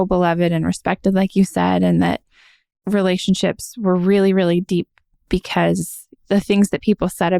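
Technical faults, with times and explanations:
4.69 s, overlap between stream segments: overlapping timestamps at a segment join make the player cut about 2 ms of real sound, so the waveform jumps and is heard as a tiny skip.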